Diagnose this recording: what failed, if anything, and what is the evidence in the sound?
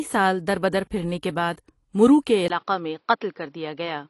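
The whole clip carries damage from lossy coding, most likely AAC compression at the codec stage. Nothing is present above 11.5 kHz. The speech sounds dull and smeared, with a warbling, fizzy edge on sibilants and held vowels. That mix of a hard cut-off and plainly audible artefacts fits AAC-LC at a low bitrate, around 32 kbps. The encoder drops high bands and quantises the rest coarsely against its hearing model.

At 2.48 s, right after "کے بعد مرو کے", the sound changes for the rest of the clip. This is likely an input switched to a poorer device, a fault at the capture or driver stage. A silence of about 20 ms marks the switch. The band then narrows to nothing above 5.6 kHz, so the speech turns boxy. The level drops by about 5 dB. A faint new background noise appears, well below the speech.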